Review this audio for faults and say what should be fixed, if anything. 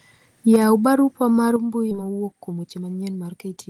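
Microphone overload at 0.51 to 0.56 s: the loudest peak carries a harsh, crackling edge where its tops are flattened, running about 4 dB past full scale with roughly a tenth of the samples clipped in that stretch. This is likely from the microphone input being set so high that the converter ran out of range. Setting the input level with enough headroom for the loudest syllables would prevent it.

Microphone volume stepped down at 0.56 s and again at 1.56 s: the first drop, about 3 dB, comes right after the clipped peak and just before "barupa mar mbui". The second, about 6 dB, follows "barupa mar". Each time the voice and background fall together in one abrupt step, which points to the call software lowering the device's input gain after judging it too hot. A correctly set input level from the start would avoid these automatic corrections.

Skip ahead at 1.91 to 1.93 s: right after "barupa mar mbui" playback jumps forward, and roughly 0.7 s of audio is missing. 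Nothing fills the gap, and the two sides are butted almost directly together. Audio that was already queued was thrown away, either lost in transit or discarded when the jitter buffer overflowed, and the delay shrank by the same amount. A more stable network path and a jitter buffer that drains gradually instead of dumping audio would prevent this.

Jitter buffer speed-up from 2.01 s to the end: the rest of the clip plays at about 117% speed with unchanged pitch, so it sounds hurried. The receiver had more audio queued than its target and cut out many short pitch-period-sized pieces to catch up, roughly 0.3 s in total. Steadier packet delivery, so audio does not arrive in bursts, would keep the buffer near its target and remove the need to compress.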